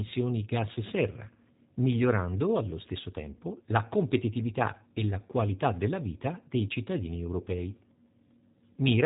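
The clip is speech carrying G.729 codec damage from start to finish: nothing passes above 3.8 kHz, and the voice has a plainly audible rough, synthetic quality, consistent with an 8 kbit/s G.729A encoding that rebuilds each 10 ms frame from a vocal tract filter, a pitch predictor and a few pulses.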